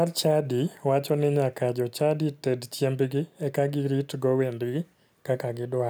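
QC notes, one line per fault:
No fault found in this speech clip.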